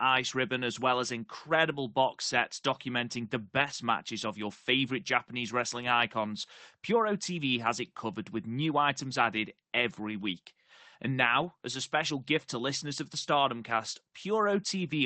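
From 3.57 to 3.71 s and from 11.41 to 11.43 s, lost packets were rebuilt from error correction. Rougher, noisier low-bitrate copies fill each spot with no gap or smeared, repeated concealment sound.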